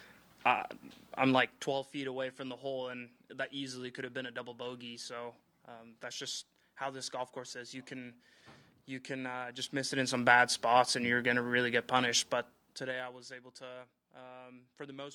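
The gain moves in unsmoothed 2 dB steps, producing zipper noise: a ticking, zipping texture from 1.37 to 1.86 s, 9.54 to 10.26 s, and 12.19 to 13.38 s while the level falls, rises, then falls again.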